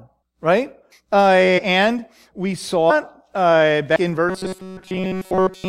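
Compressed frames are skipped three times. The first is at 1.57 to 1.59 s, the second at 2.89 to 2.91 s, and the third at 3.95 s. Each time, several whole frames never reach the output. The speech jumps forward by roughly 100 ms, then about 150 ms, then about 200 ms. Each gap is longer than the last.

From 4.29 s to the end, the speech becomes robotic. A rigid metallic buzz at 188 Hz sits on it throughout. The speech still moves underneath, but only roughly. The likely cause is playback starved of fresh audio, with the software looping the last short buffer to fill the gap. A repeat rate of 188 Hz fits a buffer about 5.3 ms long.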